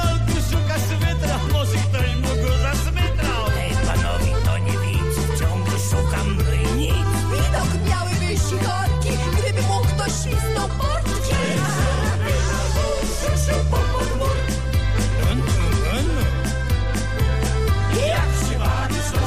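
No technical faults can be heard anywhere in the audio. Nothing interrupts or distorts the sound at any point.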